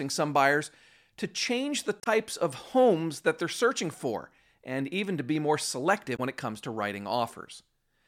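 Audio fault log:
2.00–2.07 s and 6.13–6.19 s, damaged data in a compressed stream: two brief bursts of garbled sound, each under 70 ms, in the speech. Corrupted bytes made the decoder misread those frames, lose sync and hunt for the next valid frame header.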